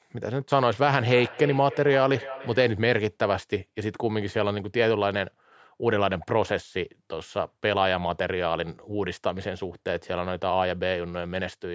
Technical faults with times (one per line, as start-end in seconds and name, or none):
0.98-2.84 feedback echo between two devices